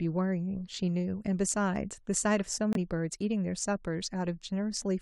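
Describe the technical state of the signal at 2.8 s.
Right around there you hear a corrupt frame muted: the sound cuts out abruptly at 2.73 s and comes back at 2.77 s, just before 2.8 s. That's a gap of about 40 ms, which fits a single compressed frame the decoder rejected because its bits were damaged. The player swapped in silence rather than playing garbage, so you get a clean, sudden hole in the speech, and the timing afterward stays where it should.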